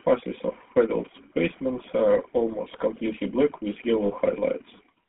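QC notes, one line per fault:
throughout: GSM full-rate codec. The vocal tract is modelled and driven by coarse, regularly spaced pulses, leaving a plainly audible buzzy, gravelly roughness. The band is held to about 150 Hz to 3.4 kHz, and the texture fits a 13 kbps full-rate coder.
4.06–4.12 s: lost GSM frames. For 40 ms, which fits two dropped 20 ms frames, the decoder reuses the last good frame's settings. The sound briefly freezes into a rough, metallic ring instead of continuing.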